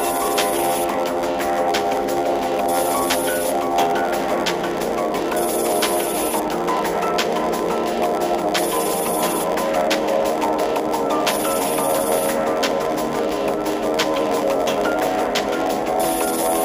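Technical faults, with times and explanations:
Throughout, block size mismatch (padded): each 512-sample block arrives only partly filled, and the remainder is padded with silence. This leaves a short gap in every block, giving a buzz at 86.1 Hz. Playback runs slower at 0.938 times speed but keeps its timbre. A spectrogram shows evenly spaced vertical dropout stripes, and the waveform shows regular flat gaps.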